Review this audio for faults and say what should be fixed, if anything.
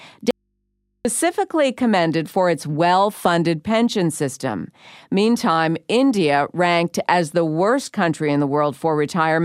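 An audio dropout to a faint residue runs from 0.31 s to 1.05 s, cutting out about 0.74 s of the speech. The cut is abrupt, and the gap holds only mains hum far below the normal level, likely because the source connection broke while the input stayed live. On a waveform the envelope drops to a near-flat line. A spectrogram shows the broadband energy vanishing, leaving thin horizontal lines at the hum frequencies. Securing cables and connectors before recording, and checking the input for interruptions, would prevent this.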